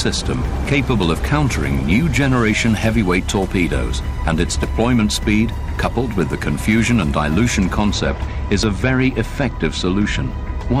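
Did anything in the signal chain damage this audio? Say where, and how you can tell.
Yes. Overlap between stream segments at 0.65 s and again at 8.63 s. This is a network or streaming-playback fault. Each event is a tiny skip where a few milliseconds of sound drop out and the waveform jumps rather than continuing smoothly. The segment timestamps overlap, so the player trims material that was never actually duplicated. Both events come from 2.0 s segments, which points to the segmenting process rather than the source.

Channel delay (comb filtering) runs from 7.93 s to the end of the clip. From that point the top end turns dull. One channel lags the other by roughly two samples, a few hundredths of a millisecond, and the two are then summed to mono. Content common to both channels cancels at evenly spaced frequencies, with the first notch around 10 kHz, which takes the air out of the highs. 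This fits an offset at the converter or driver stage.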